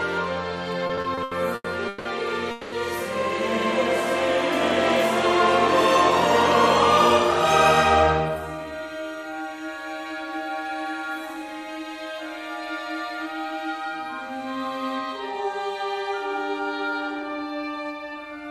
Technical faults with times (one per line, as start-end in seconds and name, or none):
0.87-2.07 repeated stalls (stutter)
2.51-2.74 call audio freeze
8.03-8.87 jitter buffer speed-up